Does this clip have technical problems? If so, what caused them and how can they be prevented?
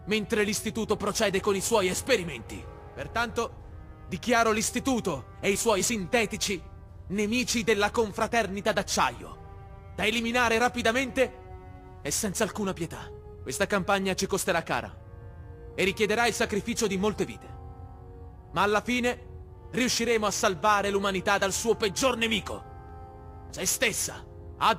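Yes. Crude rate conversion runs through the whole clip, heard as a gritty, inharmonic fizz following louder and higher sound. Samples were repeated rather than filtered, consistent with nearest-sample conversion from 44.1 kHz to 48 kHz, leaving error roughly 20 dB below the signal. A spectrogram shows faint shifted, non-harmonic copies of the real partials, and a zoomed waveform shows periodically doubled samples. Prevent it by resampling with a proper band-limited, anti-aliasing resampler.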